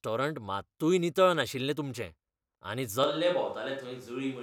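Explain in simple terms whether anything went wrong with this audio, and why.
At 3.04 s the speech abruptly turns hollow, thinner and quieter until the end, likely a switch to a distant microphone. Someone simply stepping away would sound more gradual.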